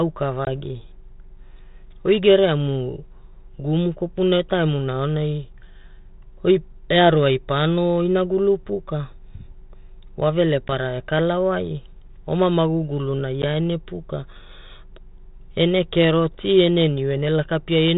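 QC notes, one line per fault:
0.45–0.48 s, 10.68–10.70 s, 13.42–13.45 s: packet loss on an ADPCM call. Gaps of about 20 ms, then 10 ms twice, a packet or two each, leave hard-edged holes. The decoder's predictor and step size lose track of the sender's across each gap, so the speech returns slightly distorted and settles within tens of milliseconds, heard over the light G.726 coding texture that fits 32 kbit/s.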